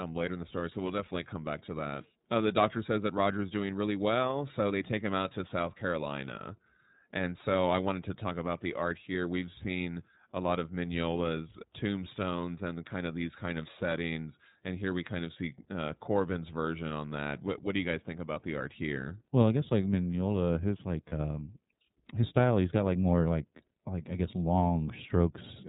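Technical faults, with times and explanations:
Throughout, iLBC codec: the speech is squeezed into a narrowband channel with nothing above 4 kHz, so sibilants lose their edge and the whole voice sounds boxed in. The plainly audible roughness and slightly synthetic buzz come from each 30 ms frame's excitation being coded on its own at a rate that fits about 13.3 kbps. That gives a steady grainy texture rather than the watery swirl of a transform codec.
21.09 to 21.13 s, lost iLBC frames: just after "his like", one 30 ms frame goes missing and the decoder fills the gap by repeating the last pitch cycle blended with noise. It is heard as a brief held, faintly buzzy vowel rather than a silent dropout or a click. Because iLBC frames do not depend on earlier ones, the voice snaps back cleanly with no smeared recovery afterwards.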